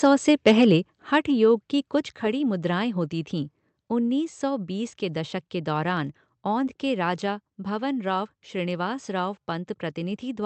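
Speech clip with the microphone level shifting underneath the talker. At 1.02 s there's a sudden drop of about 5 dB, with voice and background falling together in one step. That's likely the microphone volume stepped down by the call software, which reacts to a hot input by pulling the device's input gain rather than fading it. It happens again at 2.04 s, right after "योग की" and just before "खड़ी मुद्राएं होती थीं", this time by about 4 dB. Same abrupt one-step character, so you hear the level lurch rather than glide. Between those two, at 1.14 to 1.16 s, just before "योग की", a peak gets a brief harsh, crackly edge. That's likely microphone overload: the input was pushing about 1 dB past the converter's ceiling, so the tops of the loudest waveform peaks were flattened, though only a small fraction of the samples in that moment were hit. The second step-down following shortly after fits the software reacting to that hot input. 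The call path itself is audible as coding noise and a high end that stops around 8 kHz, which points to Opus at a moderate bitrate.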